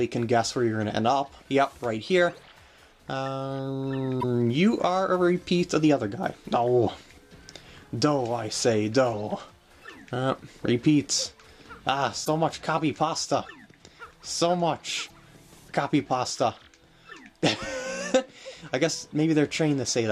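At 4.17, 12.21 and 15.04 s, damaged data in the compressed stream produces brief disturbances of about 70 ms each, where the decoder misreads corrupted frames and resynchronises. Each is heard as a chirp, squawk, click or short hole, usually with a jump ahead in the audio.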